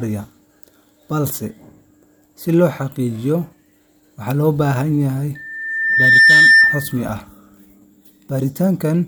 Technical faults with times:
5.35-6.97 loudspeaker feedback squeal

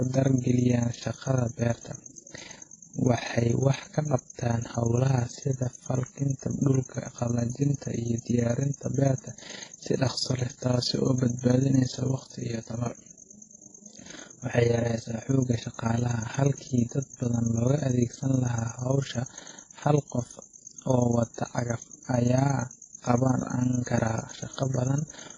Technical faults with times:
0.00-25.38 overlap-add ripple
0.00-25.38 WMA compression
11.97-15.29 channel delay (comb filtering)

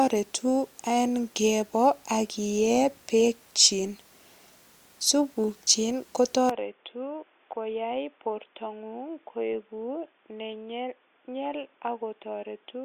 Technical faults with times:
6.49-12.84 input switched to a poorer device

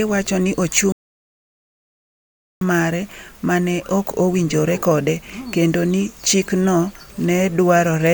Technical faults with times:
0.92-2.61 playback stall

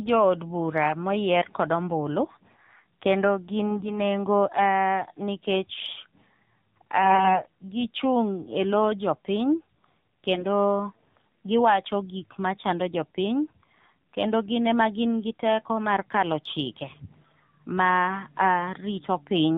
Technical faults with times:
0.00-19.57 AMR narrowband mobile codec
3.67-4.02 AMR bit errors
7.02-7.44 AMR bit errors
10.34-10.47 AMR bit errors

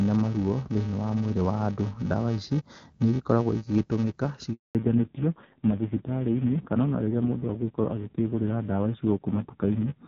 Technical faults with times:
0.00-10.07 filter restarted on every block
4.53-4.75 handover gap
4.75-10.07 fallback to narrowband

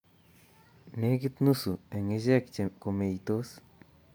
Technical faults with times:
none

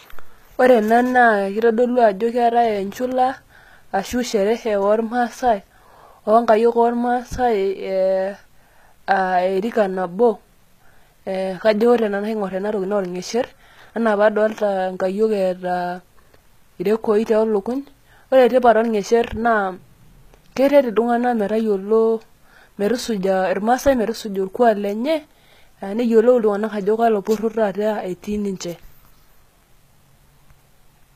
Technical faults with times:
0.00-31.15 HE-AAC compression

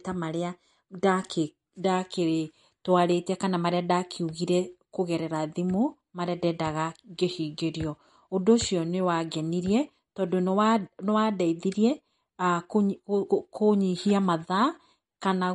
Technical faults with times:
0.00-15.54 MP3 compression

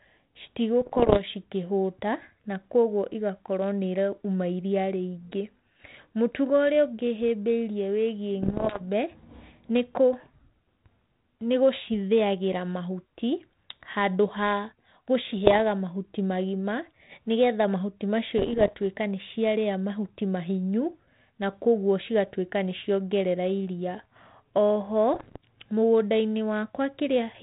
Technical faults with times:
0.81-1.20 bit errors on an ADPCM link
8.42-8.81 bit errors on an ADPCM link
15.45-15.61 bit errors on an ADPCM link
18.38-18.74 bit errors on an ADPCM link
25.14-25.37 bit errors on an ADPCM link

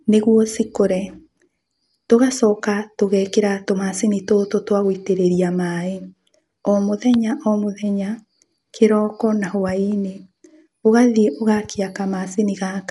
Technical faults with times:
0.00-12.90 Dolby Digital compression

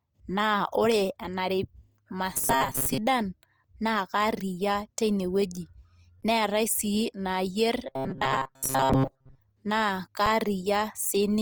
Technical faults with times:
0.00-11.41 Opus compression
2.33-2.98 robotic sound from repeated short buffers
2.85 underrun with held sample
6.21 underrun with held sample
7.87-9.39 robotic sound from repeated short buffers
8.93 underrun with held sample
10.26 underrun with held sample

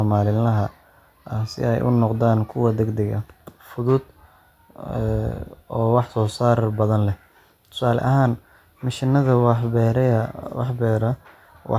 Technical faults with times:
none

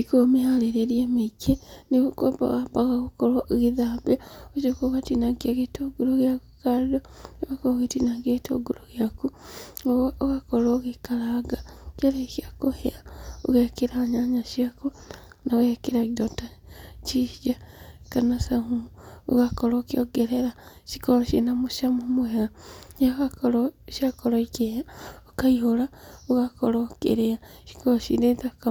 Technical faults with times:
none

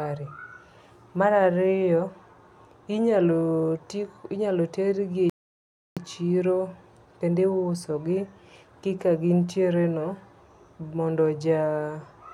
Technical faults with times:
5.30-5.97 rebuffering stall

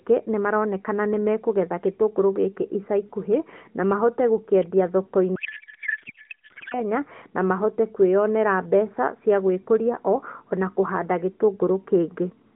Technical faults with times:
5.36-6.82 codec payload misread

